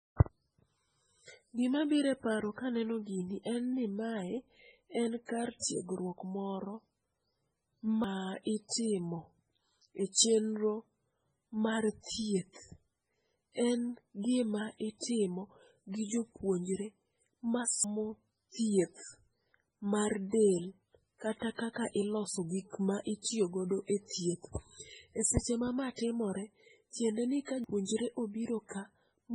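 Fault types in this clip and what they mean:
MP3 compression: The whole clip has a watery, swirly quality, with the treble gone entirely above about 10.5 kHz and s sounds turning chirpy and metallic. That's heavy damage, most likely from MP3 encoding at a very low bitrate, around 16 kbps. The encoder runs out of bits, chops the top end at a fixed point, and lets weak frequency components flicker on and off from frame to frame.
pre-echo: Just before an attack at about 5.63 s, a short smear of hiss spreads roughly 33 ms ahead of it, starting at about 5.59 s. The codec spreads its quantisation noise across a whole block, so the noise meant for the loud onset also fills the quiet gap before it. The attack sounds softened and blurred instead of crisp.
audio missing between chunks: There are sudden skips at 8.04 s, 17.84 s and 27.64 s, each losing about a fifth of a second, with the two sides butted together and no silence between them. 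The regular spacing of roughly ten seconds points to the likely cause: audio processed in 10-second chunks, with a short piece dropped at each handover from one chunk to the next.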